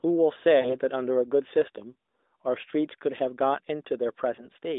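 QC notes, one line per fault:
0.60–0.76 s, lost AMR speech frames: the sound briefly stretches into a smeared, held tone that sags in level, then comes back weak and rough. This fits about two 20 ms frames failing their check, with the decoder repeating the last good pitch and vocal tract settings at falling gain. Unlike a network dropout, there is no hard gap or click.
4.36–4.49 s, lost AMR speech frames: a shorter dip, consistent with a single lost 20 ms frame being concealed the same way, followed by a rough recovery. The lightly coded 250 Hz to 3.7 kHz band of the AMR-NB channel at 12.2 kbps around it shows this is a frame error rather than general codec buzz.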